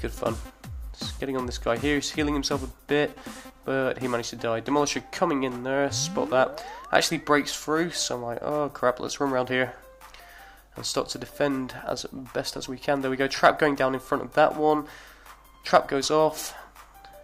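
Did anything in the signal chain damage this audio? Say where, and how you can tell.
Yes. Regular clicks about every 4.31 s from 2.76 s to 15.71 s are likely clock drift buffer slips at the buffer, with a few hundred ppm mismatch dropping or repeating dozens of samples.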